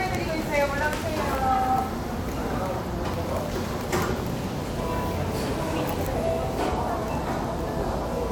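No technical faults are audible.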